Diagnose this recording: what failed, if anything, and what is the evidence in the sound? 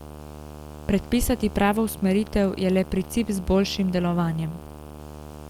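A rough buzz sits under the speech for the whole clip, roughly 15 dB below it, at 75 Hz with a fizzy hash above it. This is video or display buzz in the analogue wiring: a monitor or video cable running at a 75 Hz field rate couples its interference into the audio path.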